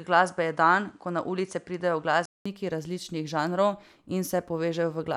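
Until 2.46 s the speech sounds dull and faintly noisy, with nothing above 10.7 kHz, then a 200 ms gap: likely an input switched to a poorer device.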